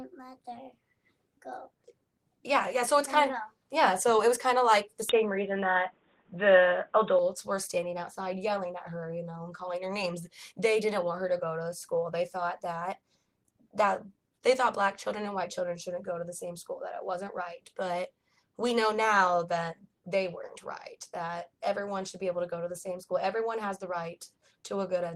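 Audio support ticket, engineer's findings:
Sound turns dull and boxy from 5.09 s to 7.19 s, nothing above 3.8 kHz, level shifts by a few dB, faint new background noise well below the signal, no gap at switch. Likely input switched to a poorer, narrower-band device, then back.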